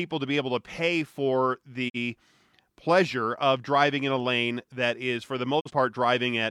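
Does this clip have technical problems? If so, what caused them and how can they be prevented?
Yes. The speech fades out over about 20 ms and goes briefly silent twice, at 1.88 to 1.96 s after "able to pay for" and 5.59 to 5.71 s after "that is for the". This is a digital broadcast dropout: the receiver muted over corrupted data, consistent with one lost frame of about 43 ms each time, and that audio is gone. A stronger signal or more robust error protection on the broadcast link would prevent it.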